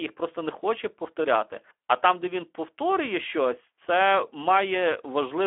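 From start to finish the speech carries Speex codec damage. The low bit budget leaves the excitation coarse, so speech sounds noisy and hoarse, which fits roughly 11 kbps. The band runs about 300 Hz to 3.4 kHz, with nothing above 3.8 kHz.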